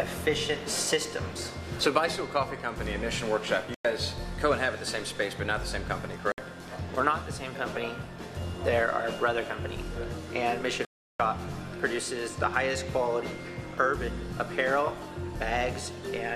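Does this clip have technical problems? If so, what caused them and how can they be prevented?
Yes. The sound cuts to silence at 3.74 to 3.85 s, 6.32 to 6.38 s and 10.85 to 11.20 s (the longest gap, about 0.35 s), then resumes further along as if it had kept playing. This is likely a Bluetooth dropout, where audio packets reach the headphones too late and are discarded. Keeping the source close to the headphones, reducing 2.4 GHz interference, or listening over a wired connection prevents it.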